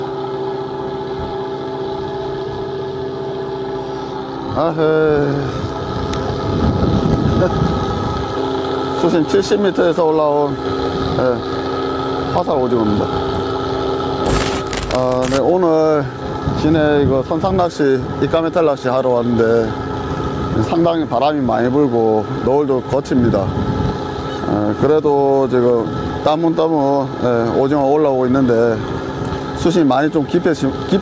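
Gain pumping runs through the whole clip, with the level swinging by around 10 dB. The likely cause is input gain set far too high, so a fast compressor or limiter keeps clamping down on peaks and releasing in the pauses, squashing loud and soft passages together. The call's microphone processing shows in the trimmed bass and the absence of content above 8 kHz.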